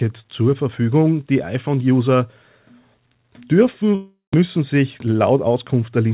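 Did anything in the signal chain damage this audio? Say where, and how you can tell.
Yes. At the network stage, from 3.95 to 4.43 s, the sound stops arriving and the receiver's concealment takes over. The last sound is stretched into a decaying buzz for about 385 ms, then about 150 ms of near silence follows. Roughly 300 ms of the original never plays, so the audio resumes further along with that stretch missing. This is likely a long network dropout, with the playout delay shifting by around 70 ms as a result.

A second fault sits in the receiver's jitter buffer, from 4.99 to 5.56 s. It is a jitter buffer speed-up: the audio runs at about 108% of normal rate while the pitch stays where it was, so it sounds hurried without sounding higher. That points to the buffer trimming many short, pitch-period-length slices, around 50 ms in total, to drain excess held audio. The whole clip has the narrow band of a G.711 A-law call path with nothing above 4 kHz, consistent with a 64 kbps link.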